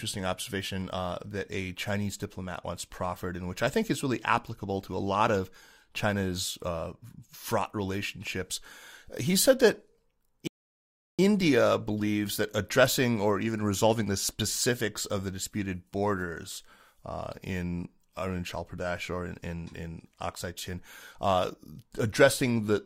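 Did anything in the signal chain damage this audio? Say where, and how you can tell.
Yes: a rebuffering stall at the playback stage, where the player's buffer ran dry. The speech drops to silence from 10.47 s to 11.19 s, then picks up exactly where it stopped, so nothing is skipped but about 0.71 s of dead air is inserted.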